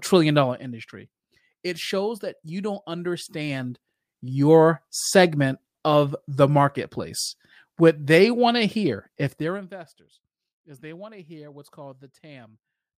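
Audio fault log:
0.39–0.79 s, zipper noise: the level drops by roughly 10 dB in small, unsmoothed steps at around a hundred per second. Each jump leaves a tiny click, so a fine ticking buzz rides on the sound. On a spectrogram this shows as faint, evenly spaced vertical lines; the waveform envelope descends like a staircase.
3.4–4.36 s, zipper noise: between "shows that you don't" and "segment of the marketplace", the level climbs by roughly 10 dB in the same stepped way, producing the same zipping and the same striped, staircase pattern.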